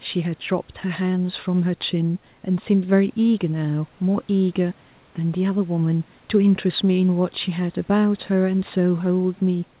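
Speech recording; no technical faults can be heard.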